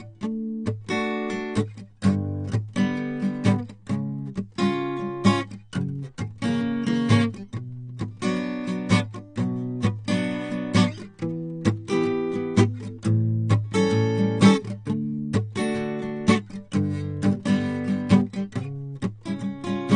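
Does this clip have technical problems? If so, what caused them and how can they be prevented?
Yes. Throughout the music there is audible AAC compression damage: nothing is present above 9.7 kHz, so the top end sounds dull, and sustained tones carry a smeared, warbling texture with fizzy, unstable high detail. The likely cause is AAC-LC encoding at a low bitrate, consistent with around 32 kbps, where the encoder lowers its cut-off and starves or noise-fills bands to fit the budget. To prevent it, encode music at 128 kbps or higher, or keep a lossless master and avoid low-bitrate transcodes.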